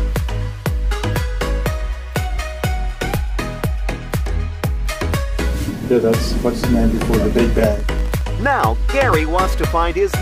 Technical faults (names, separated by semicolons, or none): train of clicks